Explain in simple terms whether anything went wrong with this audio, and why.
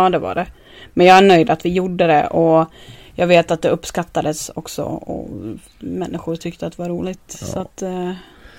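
Two short stretches of this speech have hard clipping. From 1.03 to 1.36 s, after "det var det", the sound got louder than the recording could hold. Its peaks were cut flat, which adds a harsh fuzz. A milder crackle comes at 3.32 to 3.39 s, just before "att det uppskattades också".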